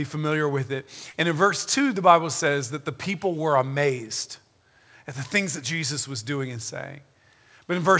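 At 1.10 to 1.16 s, about 40 ms of audio went missing and was filled by extrapolation: short concealed packet loss, heard as a brief smear in the speech above a band that stops at 8 kHz.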